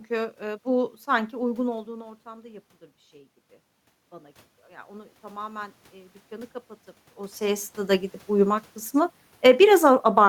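Automatic gain rising occurs from 1.7 to 3.41 s, just after "ııı bu sanki uygun", and again from 4.09 to 6.61 s. Both times the input level fell by about 17 dB, and the gain control responded slowly, adding about 3 dB and then about 5 dB, so the speech and room noise swell together over more than a second. The first drop follows the talker moving around 1.5 s. Automatic gain falling runs from 8.3 to 10.24 s, after the talker moves again near 7.0 s. The control judged the input too loud and pulled its gain down by about 6 dB, so the speech starts loud and then sinks gradually, taking the room noise down with it.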